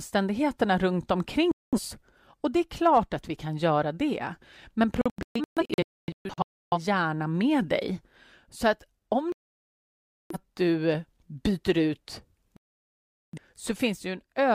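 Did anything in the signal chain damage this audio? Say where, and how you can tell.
Yes, a digital broadcast dropout at the reception and decoding stage mutes the speech at 1.52–1.80 s, 5.01–6.78 s, 9.32–10.36 s (after "att om") and 12.57–13.38 s (after "du byter ut"). In the 5.01 s stretch the speech breaks into several short holes, the longest about 0.3 s, before "hjärna med dig". The receiver muted whenever frames arrived corrupt or missing, so that content is gone. The waveform shows abrupt flat gaps, and the spectrogram shows blank vertical bands.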